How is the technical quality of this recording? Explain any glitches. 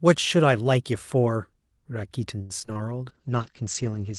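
The recording has three glitches close together in its second half, all typical of a degraded call connection.

From 2.41 to 2.77 s there is repeated packet loss, heard as robotic sound. A run of short gaps, the longest about 82 ms, was each patched by extending the preceding sound. About a third of that stretch is concealment, and around 60 ms is simply gone. The speech turns choppy. On a spectrogram, harmonics smear into flat, repeated bands broken by short dropouts. The waveform shows cloned cycles and small holes.

From 2.78 to 2.95 s comes a jitter buffer slow-down. With its reserve low, the receiver repeated pitch periods to buy time, adding about 35 ms. Speech runs at roughly 84% speed without any change in pitch, so sounds are drawn out. On a waveform, identical periods sit back to back. On a spectrogram, the harmonics are stretched horizontally without bending.

From 3.09 s to the end there is a call bitrate drop. 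The sound suggests the bandwidth estimate fell and the Opus encoder dropped from about 32 kbps to roughly 10 kbps. Coding becomes coarser and the audio bandwidth narrows from 12 kHz to 8 kHz, leaving the speech rougher, watery and muffled. On a spectrogram, the energy stops sharply at 8 kHz, with blotchy, quantised texture below it.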